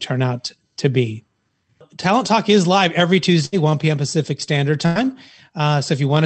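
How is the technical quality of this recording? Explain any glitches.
The recording has two brief dropouts from a burst of packet loss, heard over a call-codec signal whose top end stops at about 8 kHz.

At 3.45 to 3.55 s, just after "is live every", and again at 4.86 to 4.97 s, consecutive packets arrived too late or not at all. The receiver extended the preceding sound and faded it, producing a short held buzz or hiss, then resumed further on, skipping roughly 60 ms and 100 ms of audio respectively.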